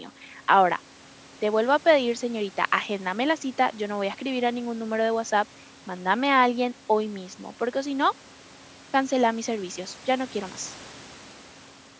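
Nothing stood out as a technical problem on listening to this speech recording, which carries the usual bandwidth of call microphone processing and a faint room noise well beneath the voice.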